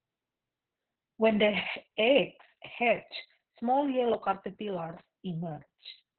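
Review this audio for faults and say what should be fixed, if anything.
Opus voice compression throughout: speech is capped near 4 kHz and sounds hoarse and robotic, fitting SILK near 6 kbps. Plain low-pass filtering muffles without that buzz. Encode at a higher bitrate so Opus keeps a wider band and finer excitation detail.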